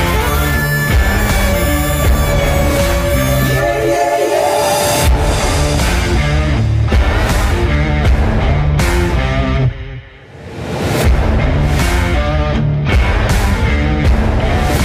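Hard clipping runs through the whole clip. The signal was driven about 4 dB beyond what one stage could pass, so its loudest peaks are sliced flat, with a few percent of samples pinned at the limit. The squared-off tops add high harmonics, heard as crackle on the loud moments. On a waveform the peaks are cut flat; a spectrogram shows broadband streaks reaching up the spectrum at each peak.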